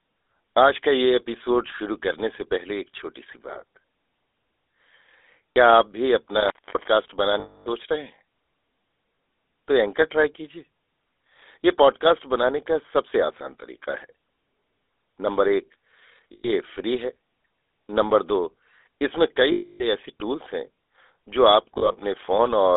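Speech carried over a GSM full-rate codec at 13 kbps: the whole clip has the codec's buzzy, gravelly roughness, and a spectrogram shows energy confined to a telephone band of roughly 300 Hz to 3.6 kHz, with nothing above. Lost GSM frames occur at 5.53 s (40 ms), 7.40 to 7.67 s (260 ms), 16.32 to 16.50 s (120 ms) and 19.52 to 19.85 s (280 ms). Each is heard as a rough metallic ring where the last good sound is held and repeated, and it shows on a spectrogram as frozen, smeared horizontal bands. Between 21.74 and 22.04 s the losses are scattered rather than continuous, with the longest run about 70 ms. An intermittent contact between 6.37 and 6.88 s cuts the sound out for about 250 ms, with crackle at the edges where a loose plug or cable opens and recloses. On the waveform this appears as a near-flat gap between sharp clicks.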